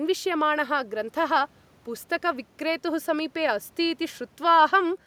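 No technical fault can be heard anywhere in this speech recording. There is no moment in it that calls for a time or an explanation.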